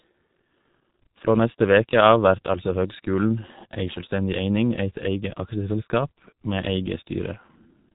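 From start to finish the speech carries heavy G.723.1 codec damage. The band stops at 3.8 kHz, so sibilants and consonant edges smear and the voice turns muffled and hoarse; the coarse, slowly updated voice model fits a rate near 6 kbit/s. On a spectrogram, energy ends at a flat ceiling around 3.8 kHz with empty space above, and the harmonics look blurred in steps of about 30 ms.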